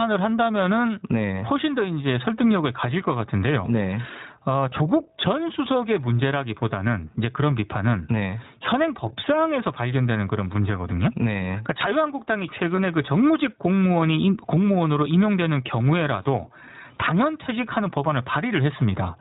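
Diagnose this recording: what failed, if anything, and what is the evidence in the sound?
At the call-processing stage, input gain was likely set far too high and a fast limiter or compressor is pulling it back on each loud syllable. The level swings by around 15 dB throughout, and the dynamics sound squashed.

At the codec stage, the whole clip passed through iLBC, a narrowband VoIP codec. Nothing above 4 kHz survives, and the speech has a plainly audible rough, synthetic quality, consistent with the 15.2 kbps mode and 20 ms frames, each frame's excitation coded independently.

At the network stage, one packet was lost at 12.76 to 12.79 s, a gap that fits a single 20 ms iLBC frame. The decoder filled it by repeating the last pitch cycle mixed with noise, heard as a brief held buzzy or breathy vowel, and the voice is right again almost immediately.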